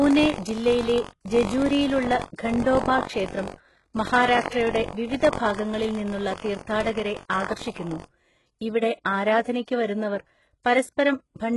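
The whole clip carries heavy codec damage, likely HE-AAC compression at something like 12 kbps. Nothing sits above 11.4 kHz, and the rebuilt treble makes s sounds gritty and metallic.

From the start to about 8.1 s there's buffer tearing. A small slice of each buffer, roughly a twenty-fifth, replays audio from about a tenth of a second earlier, giving a robotic 46.9 Hz buzz that fits a 1024-sample buffer.

At about 7.29 s there's pre-echo: codec noise smears across roughly 10 ms before a sharp attack, so a brief hiss leads in and softens it.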